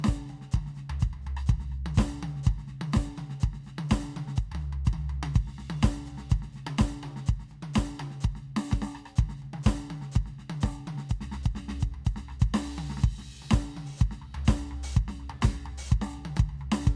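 No technical faults can be heard anywhere in this music.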